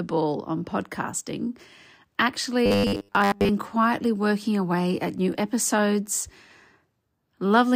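From 2.66 to 3.49 s, audio likely arrived too slowly and the software kept repeating a roughly 10 ms buffer, skipping most of the real audio. This robotic sound from repeated short buffers imposes a rigid, metallic 100 Hz buzz, ending just before "quietly working away at".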